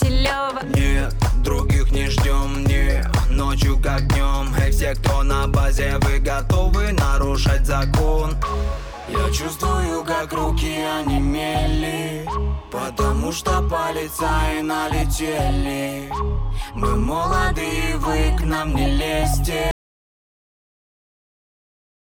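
At 19.71 s an audio dropout to silence cuts the sound abruptly to silence until the end, likely a lost input; unlike a fade, no room tone lingers.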